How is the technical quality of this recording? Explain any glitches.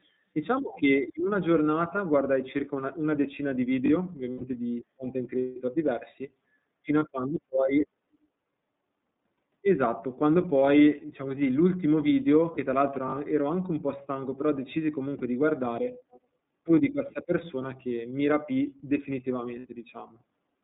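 The recording has audible technical problems: it has passed through a narrowband iLBC codec, has several short dropouts from lost iLBC frames, and has one brief burst of echo.

The whole clip went through the iLBC codec, which codes each 30 ms frame on its own and keeps roughly 150 Hz to 3.7 kHz. Everything above that band is gone, so the speech sounds boxed-in, slightly rough and synthetic, and the coding damage is plainly audible.

Lost iLBC frames occur at 4.32 s (about 90 ms), 6.99 s, 12.54 s and 15.18 s (about 30 ms each), and 19.59 s (about 60 ms). Packets went missing, and the decoder filled each gap by repeating the last pitch cycle blended with noise. Each gap is a held, faintly buzzy vowel-like sound, and the voice recovers cleanly almost immediately afterwards.

An echo leak appears from 16.11 to 16.2 s. It is a very faint copy of the voice, delayed by about 173 ms. This is likely because a loudspeaker on one end fed the microphone and the echo canceller missed part of it, so a trace came back down the line.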